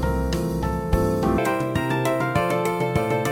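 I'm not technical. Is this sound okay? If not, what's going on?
No. From about 1.38 s to the end, the sound has a section at the wrong speed. That part plays twice as fast as it should. Because speed and pitch are tied together, it also jumps up sharply, by nearly an octave. So the last stretch sounds rushed and squeaky, like a tape on fast-forward. The likely cause is an editor or player running that section on the wrong clock.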